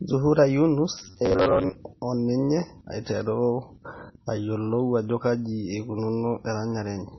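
Throughout the speech, nothing sounds above 5.9 kHz and faint detail swirls and chirps, likely MP3 compression starved of bits; a spectrogram shows a hard ceiling and flickering holes. From 0.98 to 1.75 s, robotic sound from repeated short buffers adds a rigid 93.8 Hz buzz, with about half the audio repeated, which fits roughly 10.7 ms buffers.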